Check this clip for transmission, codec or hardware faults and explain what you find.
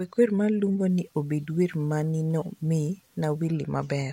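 One hardware fault is present: sample clock jitter, running from 0.89 s to 3.47 s. The converter's sampling clock wanders by roughly 5 microseconds, so each sample is captured a little early or late at random. The resulting amplitude error scales with how steeply the waveform is changing, giving an error floor roughly 35 dB below the speech. It is heard as a fine hiss or roughness riding on the louder, brighter parts of the speech, disappearing in pauses.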